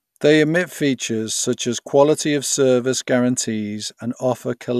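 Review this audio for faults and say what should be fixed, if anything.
No faults are audible; nothing needs fixing.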